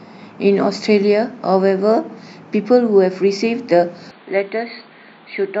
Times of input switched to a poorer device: 4.11-5.60

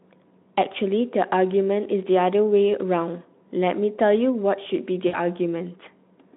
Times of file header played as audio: none

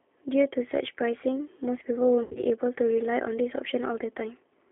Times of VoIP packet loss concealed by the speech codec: 2.23-2.43

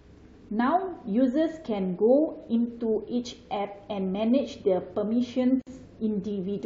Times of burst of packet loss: none

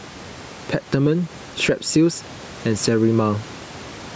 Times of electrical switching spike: none

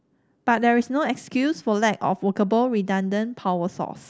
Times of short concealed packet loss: none

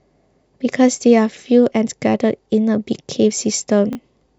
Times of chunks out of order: 3.93-3.95

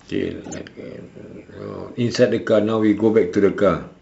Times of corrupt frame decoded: 0.44-0.57

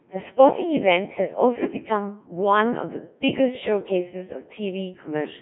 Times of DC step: none

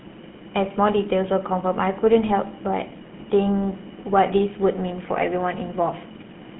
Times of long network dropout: none

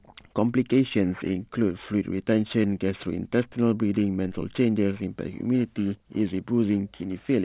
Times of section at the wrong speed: none

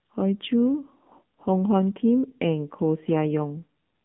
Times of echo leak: none

